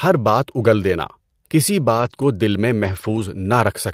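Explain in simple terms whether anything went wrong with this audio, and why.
Two stretches of this speech sound rougher and noisier, at 1.97 to 2.23 s and again at 2.83 to 3.21 s. This is a lost packet rebuilt from error correction. Pieces of the audio went missing in transit, but each following piece carried a cheaper backup copy. The player used those copies, so there is no silence. The backups are lower quality, which is why about 140 ms and 200 ms of sound come out coarse.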